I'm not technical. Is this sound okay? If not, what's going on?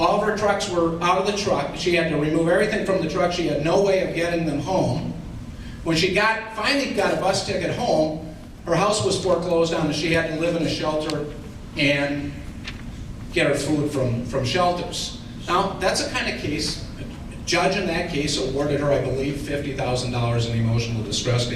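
No. Two pieces of equipment were likely running on separate, slightly mismatched clocks, so single samples get dropped or doubled. From 0.14 s to the end, that produces clock slip clicks: faint, steady ticks about ten times a second, blurring into a soft rattle.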